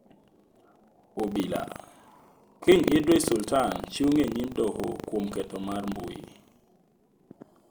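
A robotic 25 Hz rattle runs under the speech throughout. This is buffer tearing: the ring buffer's writer and reader have slipped into each other, so a small slice of every 40 ms period replays audio from roughly 150 ms earlier, hard-spliced at both edges.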